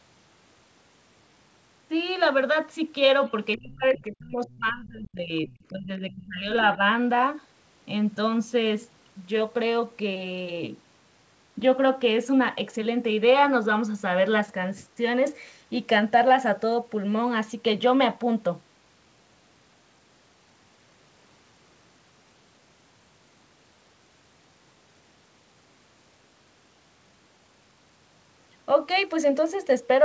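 A speech clip in which faint scraps of a second voice, roughly 30 dB below the talker and about 25 dB at most, surface at 3.53–3.57, 3.93–4.16, 4.46–4.57 and 5.52–5.65 s, likely the other side's voice leaking through from a loudspeaker past an incomplete echo canceller. Meanwhile the talker's own voice sinks by as much as about 30 dB in patches between 3.57 and 5.5 s and by about 25 dB between 5.7 and 6.81 s, together about 2.2 seconds, which points to speech suppressed in double talk as the canceller damped both voices at once. The audio tops out at 8 kHz, which fits a G.722 call path at 64 kbps.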